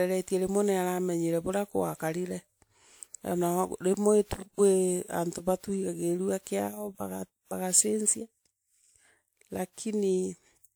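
A speech recording with generation loss running through the whole thing. The sound has that swirly, hollow smear, and consonant attacks come out blurred, which is more damage than a single 128 kbit/s pass would leave. It's likely the result of being decoded and re-encoded around five times through WMA, with each pass requantising on a shifted frame grid so the noise and spectral gaps pile up. The top end still reaches about 20.1 kHz.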